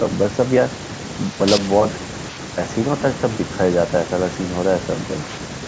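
No faults: the speech shows only the normal call microphone processing, with its low bass trimmed and nothing above 8 kHz.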